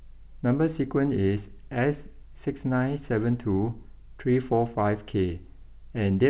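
Nothing goes wrong in this bit of speech: it has simply come over an ordinary call line, and the way nothing above 4 kHz comes through fits a G.711 A-law codec at 64 kbps doing its usual job.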